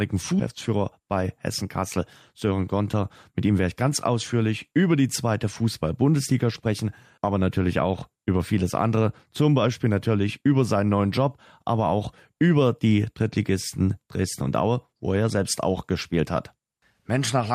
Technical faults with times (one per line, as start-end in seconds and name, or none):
0.69-1.98 jitter buffer speed-up
2.44-3.03 jitter buffer speed-up